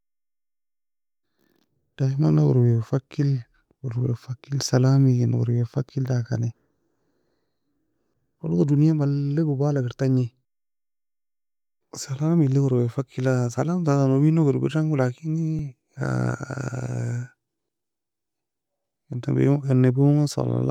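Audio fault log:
15.59 s, repeated buffer: a tiny slice of about 1.45 ms, which fits a 64-sample buffer, plays three extra times when new audio arrives late. The repeats are too short to stutter, so it comes across as a brief click or buzz, with essentially nothing lost.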